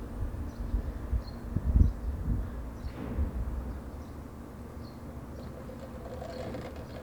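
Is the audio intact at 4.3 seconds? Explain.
No. At 4.3 seconds, as throughout the clip, the sound is grainy, and the cause is likely low bit depth without dither, consistent with about 9 bits truncated. The rounding error tracks the signal, roughly 30 dB down, so unlike a steady hiss it grits quieter passages and vanishes in silence.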